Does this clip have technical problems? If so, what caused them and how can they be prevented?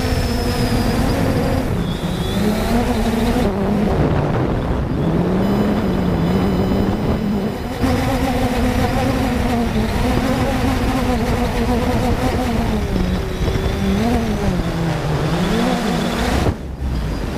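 Yes. From 5.42 to 8.89 s there is USB whine: USB's 1 ms frame timing leaks through power or ground, giving a steady 1 kHz tone, loudest at its 3 kHz harmonic, roughly 25 dB below the signal. On a spectrogram it shows as flat horizontal lines at 1 kHz multiples, brightest at 3 kHz. To prevent it, power the interface from a clean supply or isolated hub and break the shared ground path.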